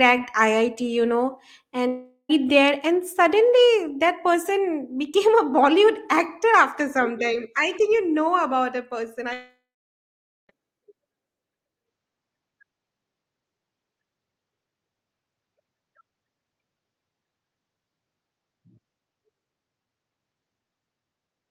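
At 1.87 s, a long network dropout, likely a stall in packet delivery, loses about 420 ms of speech. The receiver stretches the last sound into a fading buzz or hiss until 2.31 s. A second dropout follows "know about a person" at 9.33 s and loses about 1.16 s. The filler fades quickly, leaving roughly 0.86 s of silence before speech resumes at 10.51 s without the missing part.

At 11.86 s the input likely switched to a poorer device, narrowing the band to nothing above 7.6 kHz. From there to the end, the speech turns duller, drops roughly 10 dB in level, and carries a faint new background noise.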